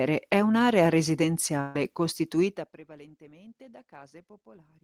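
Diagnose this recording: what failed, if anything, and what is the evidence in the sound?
Network stage: a burst of packet loss at 1.60–1.76 s drops about 150 ms of speech; concealment stretches the last sound, fading, showing as a smeared, decaying tail before an abrupt restart.

Call processing: zipper noise at 2.40–2.80 s, as gain falls about 25 dB in unsmoothed steps, roughly 100 per second; the waveform shows a staircase envelope, the spectrogram faint vertical tick lines.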